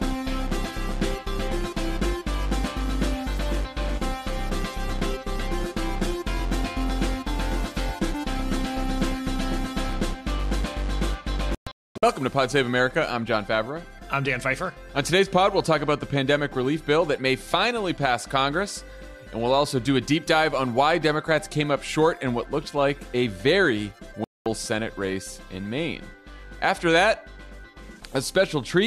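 At 11.55 s there's a digital broadcast dropout. The receiver lost good frames and muted until they came back, so the sound breaks up into several short holes spread over about 480 ms, ending at 12.03 s. The longest gap is 240 ms, and roughly 410 ms of the programme is simply gone. A second, cleaner dropout hits at 24.24 s, a single silence of about 220 ms before the sound resumes at 24.46 s.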